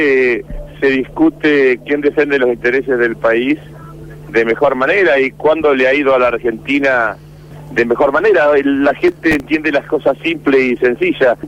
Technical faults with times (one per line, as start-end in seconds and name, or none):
9.01-9.50 processor overload crackle